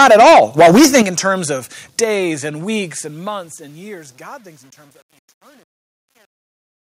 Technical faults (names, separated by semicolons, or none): microphone overload; microphone volume stepped down; truncation distortion on a fade